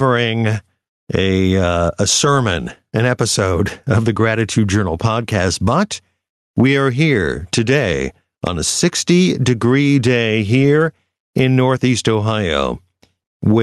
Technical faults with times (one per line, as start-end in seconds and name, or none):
0.00-13.62 gain pumping